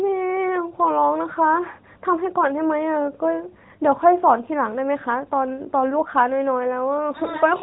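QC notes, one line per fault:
No faults found.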